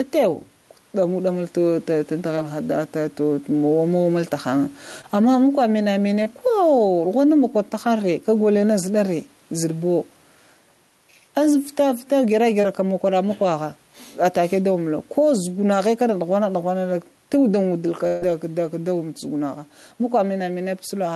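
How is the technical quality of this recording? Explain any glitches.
The recording has a pumping level throughout, four brief concealed dropouts and one longer gap near the end. It went through an Opus call path with audio up to about 12 kHz, and the room noise sits about 41 dB below the speech.

Gain pumping runs through the whole clip. The level swings by around 10 dB, and loud and soft parts end up closer in level, so everything sounds squashed. The likely cause is input gain set far too hot, with a fast limiter clamping it back on each loud moment.

Short concealed packet loss shows up at 2.35, 5.01, 6.23 and 12.61 s. Each time about 20 ms of audio didn't arrive in time. The receiver patched it by extending the previous sound and blending back in, which you hear as a quick smear or wobble, and a short consonant can get swallowed.

A burst of packet loss hits from 18.07 to 18.24 s, with about 140 ms missing. 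The decoder kept stretching the last sound while fading it down, giving a held buzz or dying hiss. Then the speech jumps ahead, and whatever fell in that stretch is gone.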